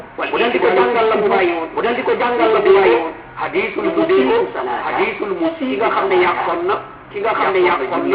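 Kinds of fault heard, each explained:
Doubled audio track: the whole clip carries a second, full-band copy of itself trailing about a second and a half behind, at roughly the same loudness as the original, so every event comes back as a clean, dry repeat with no decay or room colour to it. That flat, unchanged quality rules out a real echo. It's likely a second capture of the same signal through a slower path, or an edit that left two copies out of step.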